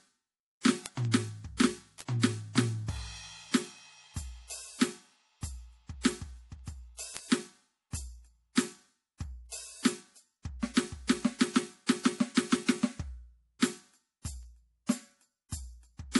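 Across the whole of the music, nothing sounds above 11.5 kHz, and the top end has the smeared, swirly texture of a heavily squeezed MP3. This is low-bitrate audio saved at a high bitrate: the material was likely encoded at a low rate first, around 48 kbit/s judging by the cut-off and artefacts, then re-encoded at a much higher rate. The second pass cannot restore the discarded detail, so the damage stays baked in.

From 0.29 s to 16.15 s there are word clock ticks: sharp clicks at a steady rate of roughly five per second, about a hundred in total, varying in strength. The receiving device is running on its own clock rather than locking to the sender's, with the two drifting apart by something near 100 ppm. Each time they slip, a single sample is dropped or doubled and the surrounding samples are misread, producing a tick.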